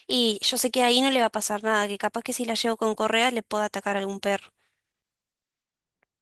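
Nothing here calls for comment: the speech carries along through its light Opus voice coding without a single fault to flag.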